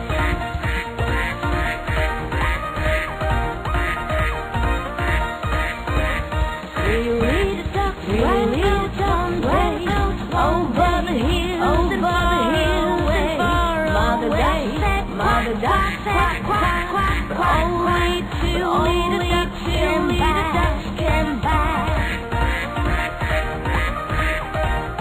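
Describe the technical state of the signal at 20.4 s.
At 20.4 s, a doubled audio track is present, as it is throughout the clip. A second full-band copy trails the original by about one and a half seconds. It is about as loud. It carries no decay or room colour. The likely cause is a slower second capture path.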